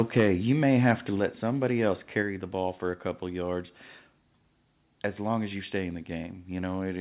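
From 0.17 to 0.27 s the loudest peaks are flattened and carry a harsh crackle. This is microphone overload, likely from an input level high enough to push the converter about 5 dB past its limit. A milder bout follows at 0.66–0.91 s, about 2 dB over. Codec distortion would colour everything, but here the grit sits only on the peaks.

At 0.2 s, 1.2 s and 2.22 s the voice and the background drop together in a single abrupt step, by about 3, 5 and 3 dB. This is microphone volume stepped down, likely the call software lowering the input gain. A fade would glide, but these drops land instantly.

Throughout, nothing above 4 kHz comes through, which fits a G.711 call path.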